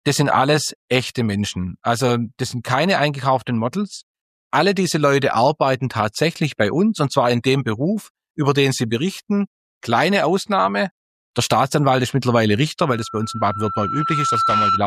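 From 12.86 s to 14.84 s, a loudspeaker feedback squeal comes in. A single tone at 1.3 kHz appears and swells over about a second and a half. It climbs until it sits roughly level with the rest of the sound. The cause is a closed loop: the microphone is hearing the loudspeaker it drives. At 1.3 kHz the loop gain passes one. That frequency keeps feeding itself and rises into a steady howl that runs almost to the end.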